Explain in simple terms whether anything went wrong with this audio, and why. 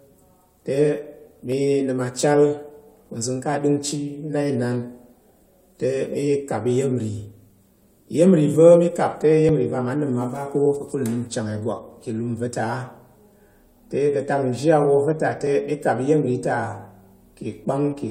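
Four tiny clicks or skips break into the speech at about 1.52, 7.50, 9.49 and 15.47 seconds. They come from an overlap between stream segments. The audio arrives in short chunks, here roughly two seconds each. Two neighbouring chunks claimed a few of the same milliseconds, so the player trimmed that overlap, but the sound hadn't really been doubled. A sliver of real audio went missing, and the waveform jumps across the gap.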